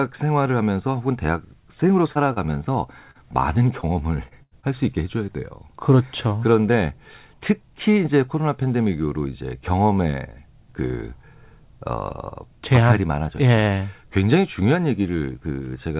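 Starting at 2.12 s there's a run of short concealed packet loss, at 2.12, 2.33, 3.11, 3.81 and 4.28 s. Each time about 30 ms of the call didn't arrive, and the receiver papered over it by carrying the previous sound forward for roughly 25 to 35 ms before blending back into real audio. You hear a quick smear or wobble, and a short consonant can drop out entirely.

At 4.43 to 4.54 s there's a burst of packet loss, about 90 ms missing in one go. Here the concealment stretches the last sound over about 84 ms and fades it down, so you get a held buzz or a dying hiss. Then the audio picks up further along, with the bit in between gone.

One more short concealed loss follows at 4.60 s, again about 30 ms, heard as another brief smear. The whole thing runs through a narrowband call path with nothing above 4 kHz, which fits G.711 A-law.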